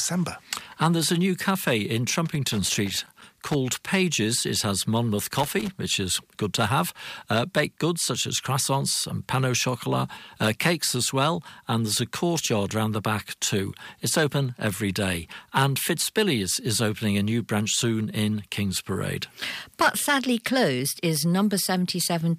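A burst of loose connector crackle starts at 2.26 s and runs to 3.55 s. A worn or dirty contact in the signal path is making and breaking as it shifts. Each break chops the speech. It sounds like irregular scratching over the voice. A second, shorter burst follows from 5.33 s to 5.72 s, with the same ragged crackle.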